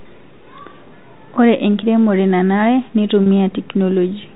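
At 3.24 to 3.26 s, packet loss with pitch repetition. About 30 ms went missing, fitting three 10 ms packets. The receiver repeated the last pitch period, leaving a brief, buzzy held tone over the G.711 telephone band.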